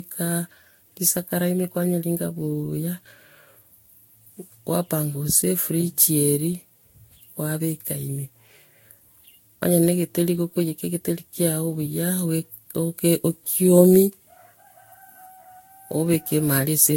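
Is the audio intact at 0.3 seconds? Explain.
No. At 0.3 s the speech has generation loss, present throughout: swirly, hollow, smeared attacks and nothing above 16.6 kHz, worse than a single Vorbis pass near 64 kbit/s would give, likely from several re-encodes.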